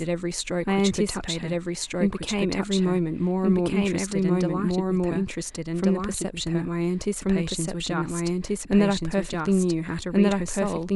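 A doubled audio track runs throughout the clip: a second, equally loud copy of the speech trails the original by about a second and a half, with no decay or room colour. This likely comes from a slower capture path recording the same signal again.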